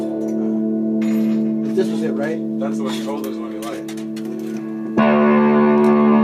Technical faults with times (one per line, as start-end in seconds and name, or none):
0.00-6.24 gain pumping